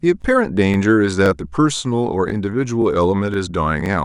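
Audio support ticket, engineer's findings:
Overlapping chunks at 0.22–0.24, 0.74–0.76, 1.26–1.28, 1.78–1.80, 2.30–2.32, 2.82–2.84, 3.34–3.36 and 3.86–3.88 s. Short stutter or click at each join, spaced about 0.52 s apart. Probable component: the chunking or streaming stage. Each 0.5 s chunk starts 20 ms before the previous one ends, so that 20 ms of speech plays twice at every boundary. The repeat pushes each later join back by 20 ms.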